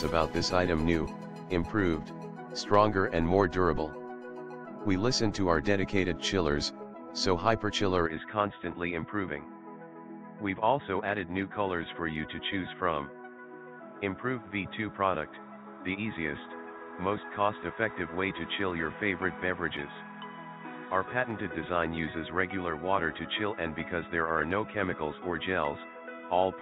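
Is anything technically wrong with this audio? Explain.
Yes. From 8.06 s to the end, the sound suddenly goes dull and boxy, with nothing above 3.8 kHz. It drops by around 5 dB and picks up a faint new background noise sitting well under the sound. There's no gap at the switch. That mix of narrower band, different level and different noise floor points to an input switched to a poorer device, most likely another microphone or a headset's call profile taking over mid-recording.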